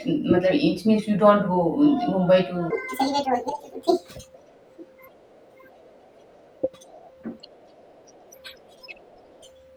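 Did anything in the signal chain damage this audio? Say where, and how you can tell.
Yes. From 2.70 s to the end, the speech suddenly runs 1.53 times too fast, jumping up about seven semitones and sounding hurried. That's a section at the wrong speed. Pitch and tempo shift together, so this was likely a playback or editing stage resampling against the wrong clock.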